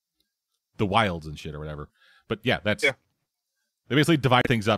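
Near the end, from 4.41 to 4.47 s, the speech cuts out completely for about 34 ms and then carries on. This is most likely a Bluetooth stall: interference held back packets, the headphones' buffer emptied, and playback paused until the resent data arrived. Unlike a concealed packet loss, which smears or repeats a fragment, or a click from a digital glitch, here there is a clean hole of true silence before the speech resumes.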